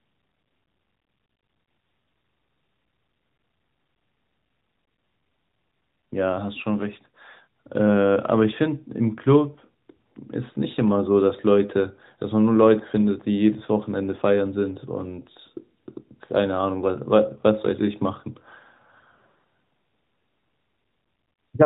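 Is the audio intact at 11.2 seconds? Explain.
Yes, the audio is intact at 11.2 s, with no dropout, glitch or other fault at that moment beyond the light, band-limited character of the AMR narrowband mobile codec carrying the speech.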